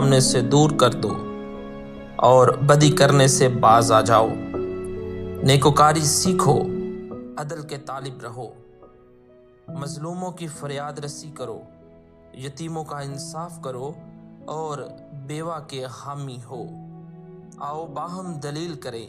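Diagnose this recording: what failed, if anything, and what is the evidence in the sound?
Zipper noise runs from 6.82 to 7.49 s while the level falls by about 15 dB. The fall happens in discrete jumps at roughly a hundred per second rather than along a continuous ramp, so a fine ticking rides on the sound. The gain is being updated once per processing block with no interpolation, pointing to the driver or buffer stage. On a waveform the envelope descends as a staircase. A spectrogram shows faint, evenly spaced vertical broadband lines across that span.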